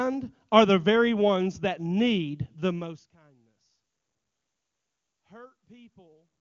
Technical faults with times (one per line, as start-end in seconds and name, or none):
none